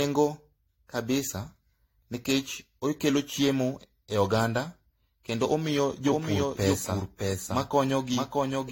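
Generation loss runs through the whole speech clip. The audio has the swirly, hollow, smeared quality of a signal likely decoded and re-encoded around four times, each pass adding fresh quantisation noise and spectral holes on a shifted frame grid. The character points to a 64 kbit/s AAC-LC chain, yet it sounds worse than that bitrate alone would give. Consonant attacks are blurred, and nothing is present above 16.6 kHz.

A doubled audio track begins abruptly at 6.07 s and continues to the end. A second, full-band copy of the speech trails the original by roughly 0.7 s, about 5 dB quieter. It has no decay or room colouring, so it is not an echo. The likely cause is a slower capture path or an edit that left two copies out of step, and the result is a dry repeat under the original.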